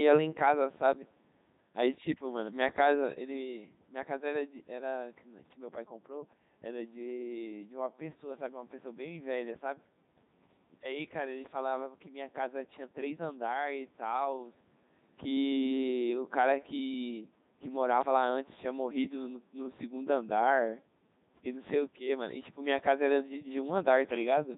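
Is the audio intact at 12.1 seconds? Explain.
No. The Codec 2 vocoder runs throughout the speech at 3.2 kbit/s, so at 12.1 s the voice is resynthesised from sine waves and sounds robotic and buzzy, not the swirly smearing of a waveform codec.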